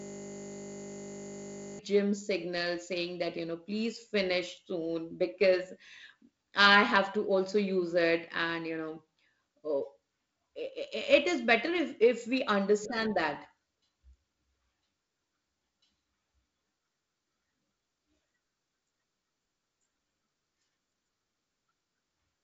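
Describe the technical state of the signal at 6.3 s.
At 6.3 s the speech is intact, with no fault present, carried through G.722 wideband telephone coding at 48 kbit/s, which keeps it band-limited below about 7.8 kHz with only light coding noise.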